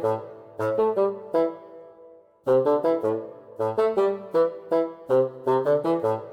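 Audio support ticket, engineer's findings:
No audible faults found; no action required.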